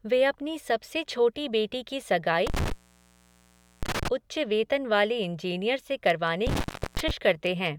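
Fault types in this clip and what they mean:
Intermittent contact, 2.47–4.08 s and 6.47–7.11 s: a loose plug or cable joint briefly losing connection, so the signal drops out with crackle at the moments the contact breaks and remakes, and faint hiss remains while it is open. The first break follows "बेटी की", leaves the line open for about 1.11 s, and returns before "उच्च वेतन वाले इंजीनियर". The second, after "वेतन वाले इंजीनियर से", stays open for about 0.36 s.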